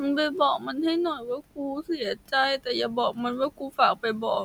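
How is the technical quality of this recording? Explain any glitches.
The recording has one recurring glitch: speech cut by the noise suppressor. The suppressor mistook quiet parts of the speech for background noise. Those parts were turned down along with the room noise, which sits about 21 dB below the speech.

The cuts happen at 0.59–0.78 s, 1.15–2.33 s and 3.5–3.79 s, with gain drops of about 10, 18 and 16 dB. Soft consonants and word endings sound swallowed or faint. This is worst in the middle stretch, where roughly half a second is affected.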